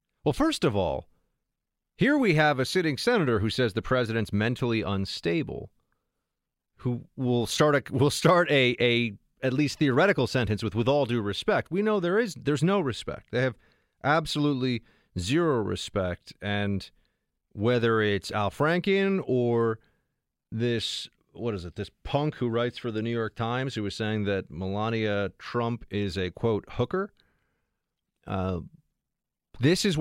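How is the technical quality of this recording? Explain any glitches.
Nothing stood out on listening to the speech recording; there were no glitches to explain.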